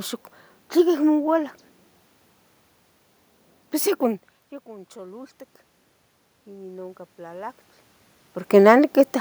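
From 6.45 to 7.61 s, automatic gain rising: after the input dropped by about 21 dB, the gain control slowly adds about 4 dB, so speech and room noise swell together. The waveform envelope and noise floor climb steadily, and the spectrogram brightens evenly across all frequencies.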